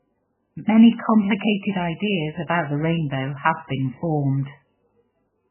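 MP3 compression damage runs through the whole speech recording, with nothing above 3 kHz and a heavily watery, swirling texture. This is likely from an encoder starved of bits, which fits roughly 8 kbps, cutting the treble outright and switching weak frequency lines on and off between frames.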